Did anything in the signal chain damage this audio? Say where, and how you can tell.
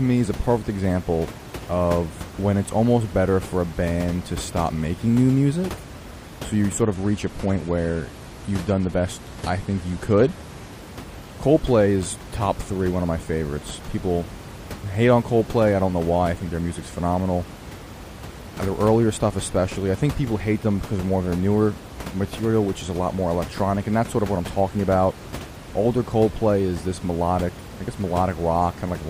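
Yes. There's an adaptive stream at a lower bitrate between 6.81 and 10.81 s, so this is a network-driven codec switch. The top end abruptly vanishes above 13.1 kHz and the speech picks up that smeared, swirly codec texture, then snaps back with no gap at either edge. That fits the player dropping from roughly 96 to 48 kbit/s AAC while the connection sagged. The room noise, about 15 dB under the speech, is just the recording space.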